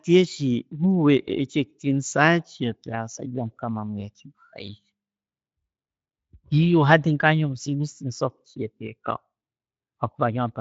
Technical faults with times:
none

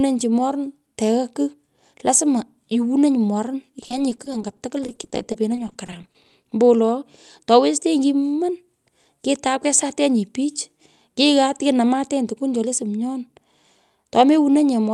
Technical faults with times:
3.81-6.53 repeated packet loss (robotic sound)

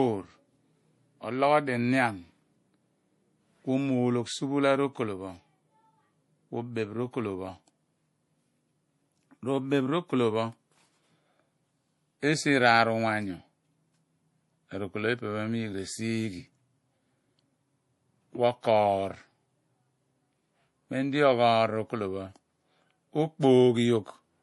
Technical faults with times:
0.00-24.43 MP3 compression

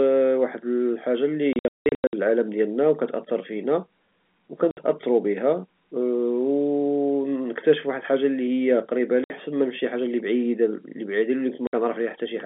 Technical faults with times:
1.53-2.13 packet loss filled with silence
4.71-4.77 packet loss filled with silence
9.24-9.30 packet loss filled with silence
11.67-11.73 packet loss filled with silence

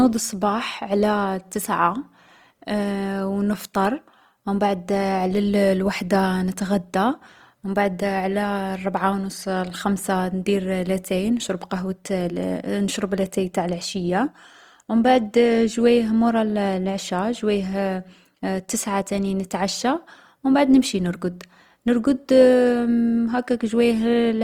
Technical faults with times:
0.00-24.43 Opus compression

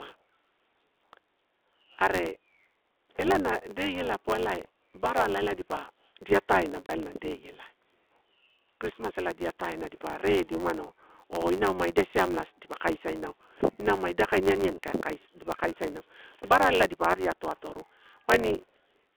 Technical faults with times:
0.00-19.17 block size mismatch (truncated)
6.86-6.89 packet loss filled with silence

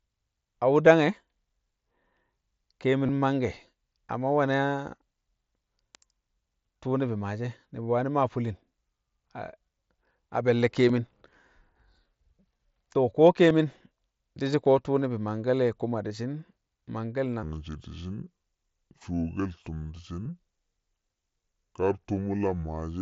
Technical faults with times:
3.06-3.09 concealed Bluetooth headset packet loss
10.89 concealed Bluetooth headset packet loss
13.50 concealed Bluetooth headset packet loss
16.08 concealed Bluetooth headset packet loss
17.43-23.01 section at the wrong speed
20.24 concealed Bluetooth headset packet loss
21.93 concealed Bluetooth headset packet loss

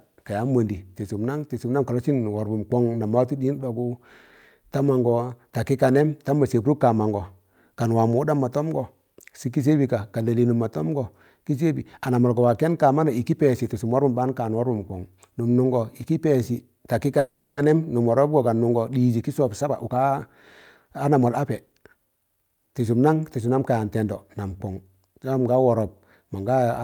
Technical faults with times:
17.19-17.60 call audio freeze
19.42-20.22 jitter buffer speed-up
20.85-22.10 jitter buffer speed-up

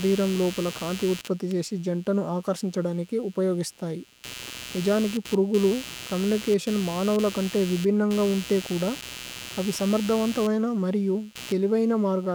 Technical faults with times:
0.00-12.34 computer activity noise

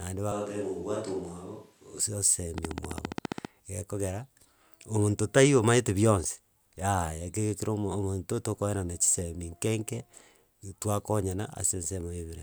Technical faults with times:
0.32-2.00 switch to a distant microphone
2.58-3.46 train of clicks

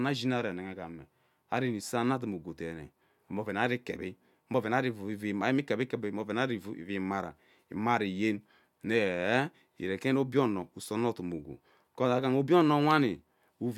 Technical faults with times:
none

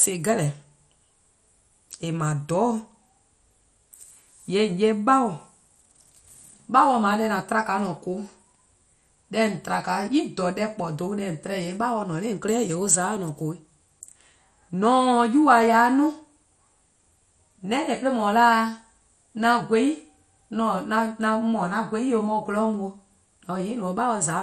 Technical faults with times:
0.00-24.43 MP2 compression

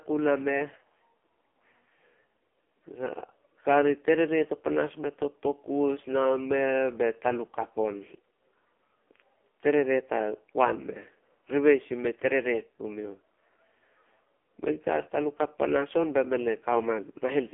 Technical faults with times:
0.00-17.53 AMR narrowband mobile codec

